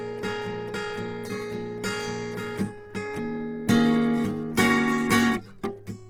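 Throughout the music, Opus compression damage is plainly audible. Tones sound rough, grainy and noisy rather than swirling. The likely cause is Opus in its CELT music mode, short of bits, filling bands with noise. This fits roughly 16 kbps. Bandwidth reaches 20.2 kHz.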